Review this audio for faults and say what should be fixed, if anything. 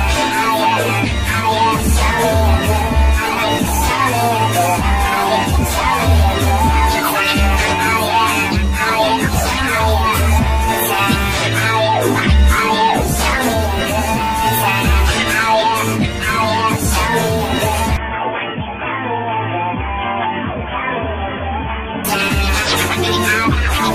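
Input switched to a poorer device, from 17.97 to 22.05 s: the sound abruptly turns boxy, with nothing above 3.4 kHz, drops a few decibels and gains a faint new noise floor, with no gap at either switch. The likely cause is the system moving capture to a narrower-band microphone or headset call profile, then back. Locking the recording to one fixed input device and disabling automatic device switching would prevent it.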